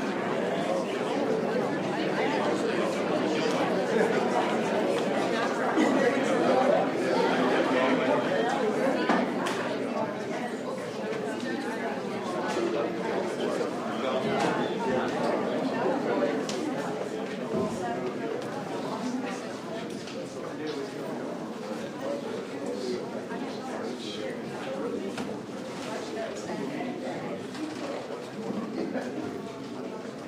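No technical faults can be heard anywhere in this recording.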